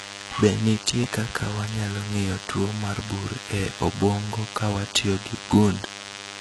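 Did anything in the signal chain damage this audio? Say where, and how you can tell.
Yes, in two places. The first is the analogue wiring. A steady, thin buzz at 100 Hz with a dense stack of harmonics runs through the whole clip, sitting roughly 15 dB below the speech. That is DECT cordless phone buzz. A nearby DECT handset or base transmits a short radio burst every 10 ms, and the audio circuit rectifies the burst envelope into audio, so the buzz repeats at 100 Hz.

The second is the codec. Nothing in the clip reaches above 11.8 kHz, and the upper band is a synthetic copy of lower material rather than the original. The harmonics above the crossover don't line up with those below, and s sounds come across gritty and lispy. The damage is heavy throughout. This is likely HE-AAC compression, which fits a very low bitrate around 16 kbps. Spectral band replication rebuilds the treble from lower bands shaped by a coarse envelope.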